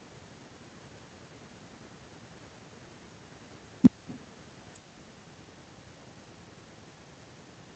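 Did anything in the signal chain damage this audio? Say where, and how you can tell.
Yes. At the call-processing stage, echo with no canceller runs through the whole clip: each phrase returns roughly 300 ms later, about 18 dB quieter and thinner, because the far end's loudspeaker feeds its microphone unchecked. A spectrogram shows faint, delayed ghosts trailing every speech burst.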